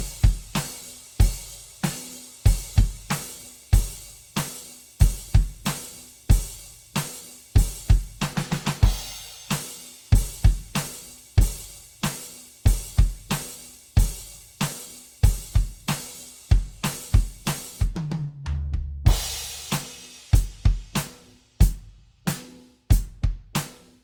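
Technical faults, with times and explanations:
Throughout, generation loss: the music sounds swirly, hollow and smeared, with softened attacks, likely from about ten repeated Opus encodes at a rate fitting 64 kbit/s. A spectrogram shows time-smeared onsets and nothing above 20.2 kHz.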